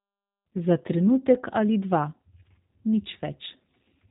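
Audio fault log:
Throughout, G.729 codec: the speech has that slightly rough, synthetic edge you get when a voice is rebuilt rather than carried, and the codec damage is plainly audible. At around 8 kbit/s, which fits G.729A, each 10 ms frame is resynthesised from a vocal tract filter, a pitch guess and a handful of pulses, so fine detail gets smoothed into buzz. Nothing above 3.8 kHz makes it through, which is why it all sounds boxed in and phone-like.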